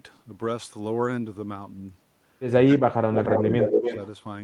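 From 2.66 to 3.88 s the speech dips and breaks up, falling by about 35 dB at its deepest, with about a second affected in total. This is speech suppressed in double talk, likely an echo canceller muting the near talker while the far side spoke.

From 3.15 to 4.08 s a second copy of the speech trails the original by 280 ms, only a few decibels quieter. This is echo leak, likely loudspeaker sound reaching the far microphone and escaping its echo canceller.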